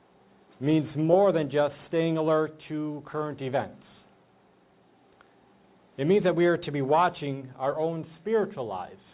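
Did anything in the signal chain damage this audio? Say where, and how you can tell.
No, nothing in the signal chain audibly damaged this audio, and no stage leaves any trace in the sound.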